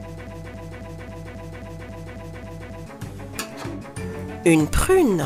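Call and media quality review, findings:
Broken-record loop, 0.0 to 2.86 s, already running when the audio begins: a 270 ms fragment repeats exactly about ten times, back to back. The player or stream has likely stalled and is re-sending its last buffer, so that stretch of audio is lost.

Compressed frames skipped at 3.80 s: a jump forward of roughly 300 ms, about ten 26.1 ms frames. The decoder dropped missing or damaged frames.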